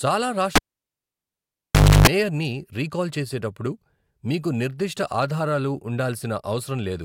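A cable pulled and plugged in runs from 0.55 s to 2.08 s in this speech clip. A live connection is broken, giving a pop and then about 1.47 s of near silence with no signal reaching the input. As the plug goes back in, only its tip touches at first and picks up about 0.3 s of 50 Hz mains buzz. A second pop follows as full contact restores the sound, just before "మేయర్ని రీకాల్ చేసేటప్పుడు మీకు".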